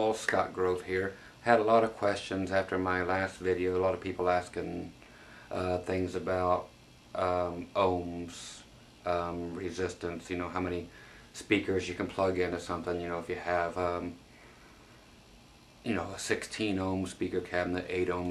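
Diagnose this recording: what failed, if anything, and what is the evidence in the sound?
Nothing in the signal points to a failure at any stage from capture and conversion through transmission, storage and playback, so there is no fault to diagnose.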